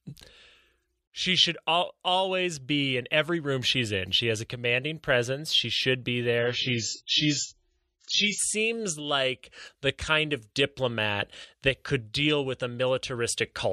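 From 6.39 s to 8.39 s the speech suddenly loses quality for two seconds. This is an adaptive stream at a lower bitrate. The player switched to a cheaper version of the stream when the connection slowed. Nothing is heard above about 7.6 kHz, so the speech turns dull. Codec smearing rises. The change is abrupt, with no gap. The sound fits a drop from a high-rate AAC stream to one near 12 kbit/s.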